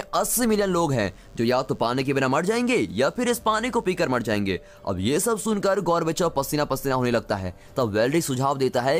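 From 1.03 to 4.22 s, a nearby DECT transmitter's 100 Hz radio bursts get rectified in the audio circuit, causing a faint, thin DECT cordless phone buzz.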